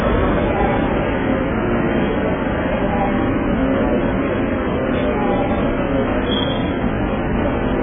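From start to finish, the sound is dull and heavily damaged. Nothing reaches above 3.6 kHz, so all the upper detail is gone. The likely cause is AAC compression, the AAC-LC type, pushed to an extremely low bitrate. The level of damage fits something around 8 kbps. At that rate, the encoder cannot afford the high frequencies, so it cuts them off. The few bits left are spread thinly over what remains, which leaves the sound smeared and muffled.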